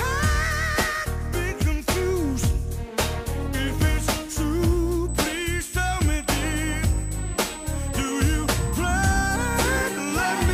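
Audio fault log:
5.09–10.53 s: USB whine, a steady 8 kHz tone sitting about 15 dB under the signal, from 125-microsecond USB microframe current leaking in through the power or ground.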